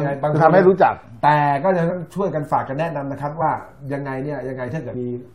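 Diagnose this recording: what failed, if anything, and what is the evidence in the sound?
The decoder is not playing some compressed frames, either because they are missing from the stored file or because it rejected them as corrupt, so this is a codec or storage fault. The sound jumps forward at 1.89 s and 3.40–3.42 s, losing about 70 ms each time, and at 4.94 s, losing about 100 ms. That points to runs of roughly three and five 23.2 ms frames.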